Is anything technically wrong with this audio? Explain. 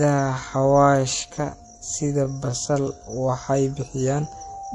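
Yes. The whole clip has a watery, swirly texture with nothing above 11.3 kHz, likely from MP3 compression at a low bitrate around 48 kbps, where starved frequency lines drop in and out.

From 0.0 to 3.32 s the speech is slowed to 0.675 times its pace at unchanged pitch, sounding dragging. This likely points to a time-stretched section, where short pieces are repeated to lengthen the audio.

From 4.06 s to the end, a loudspeaker feedback squeal appears as a single 786 Hz tone swelling to roughly the level of the speech. A microphone–loudspeaker loop exceeded unity gain at that frequency.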